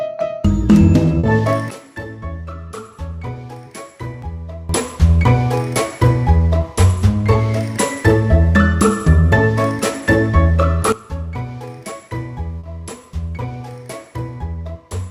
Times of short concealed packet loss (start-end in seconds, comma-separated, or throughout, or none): 1.19-1.26, 12.59-12.66